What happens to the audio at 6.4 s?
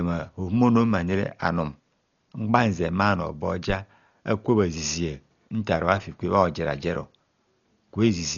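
At 6.4 s the speech carries the same damage heard from start to finish: likely Dolby Digital compression at a very low bitrate, the heavy coding loss fitting a stream of about 40 kbps. Starved of bits, the encoder cuts the band and leaves many frequency lines without mantissa data, so the decoder fills them with dither noise. Nothing sounds above about 6.9 kHz, so the speech is dull and muffled, with a rough, fluttering noise clinging to its tonal parts.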